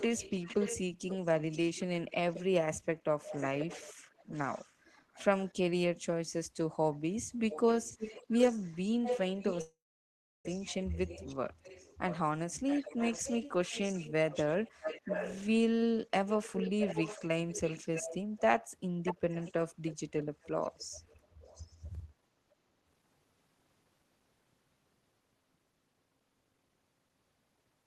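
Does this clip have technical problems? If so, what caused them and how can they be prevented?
Yes. There is an echo leak in eight stretches: 0.0–2.44 s, 3.23–5.53 s, 6.94–7.15 s, 7.5–12.18 s, 12.68–15.52 s, 16.27–18.40 s, 19.04–19.53 s and 19.85–21.76 s. A delayed copy of the speech trails the original. It is mostly about 10 dB below it, and fainter at 3.23 s, 6.94 s and 19.85 s. The delay grows from about 0.53 s to 0.64 s. The likely cause is a loudspeaker on the far end whose echo canceller let its pickup through. A headset or a better-tuned echo canceller would prevent it.

There is also a long network dropout from 9.61 to 10.46 s, about 0.84 s of lost audio. The last sound is stretched into a brief fading tail. Then about 0.7 s of silence follows, and the speech resumes with that part missing. Packets most likely stopped arriving for that stretch. A steadier connection, with a larger jitter buffer or forward error correction, would prevent it.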